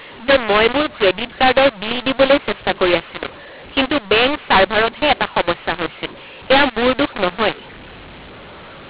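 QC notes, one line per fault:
Throughout, mu-law and A-law mixed up: the speech was coded as G.711 A-law but decoded as mu-law, so each 8-bit code maps to the wrong point on the companding curve. Levels are rescaled unevenly, giving harsh, gritty distortion, and near-silent samples are pushed well above zero, filling pauses with hiss. On a waveform the gaps show a thick noise band instead of a flat line. A spectrogram shows broadband smear filling the telephone band up to 4 kHz.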